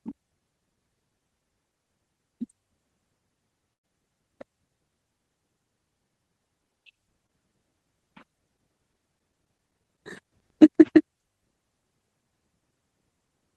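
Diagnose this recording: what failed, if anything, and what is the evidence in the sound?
From 3.73 to 3.85 s the speech turns into a held, fading continuation of the last sound, then jumps ahead. This is a burst of packet loss at the network stage: about 100 ms of audio never arrived, and the receiver stretched and faded the previous sound across the hole.

At 7.26 to 7.31 s there is a brief smear and wobble in the speech. This is short concealed packet loss on the network: roughly 20 ms went missing, and the decoder extrapolated the preceding sound before cross-fading back into the real signal.

Between 8.81 and 10.49 s come 14 regular ticks, about eight per second, of uneven strength, the longest around 10 ms. These are CD scratch ticks from storage: a blemish defeats error correction once per disc revolution, so the player interpolates or mutes each damaged stretch.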